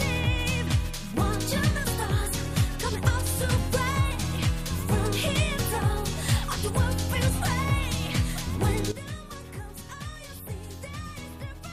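At 8.92 s the level falls abruptly by about 12 dB and stays down until the end of the clip. This sudden gain jump was likely caused by a digital gain change applied between one sample and the next with no ramp. The sound and its background noise drop together in a single step. On a waveform the envelope shrinks to roughly a quarter of its height at one point, and on a spectrogram every band dims at once along a sharp vertical edge.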